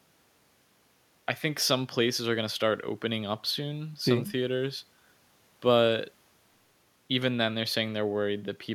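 Speech recording with nothing technically wrong.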